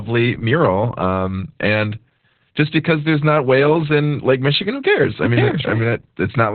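Across the whole clip the speech carries heavy Opus voice compression. The sound points to a very low rate near 8 kbps in narrowband SILK mode. Nothing reaches above 4.4 kHz, so a spectrogram shows a flat ceiling there. The voice sounds muffled, hoarse and slightly robotic.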